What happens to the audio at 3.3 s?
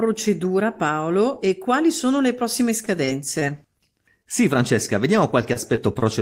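That's inside a stretch of repeated packet loss (robotic sound) from 2.85 to 3.43 s, right after "quali sono le prossime". A handful of short holes, the longest 22 ms, get patched by stretching the last sound, so the speech turns choppy, with pieces missing.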